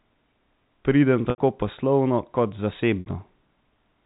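Packet loss with pitch repetition at 1.30 s (80 ms) and 3.00 s (60 ms): the receiver repeats the last pitch period to bridge each gap, fading it out over about 50 ms into silence before the speech returns with a short cross-fade.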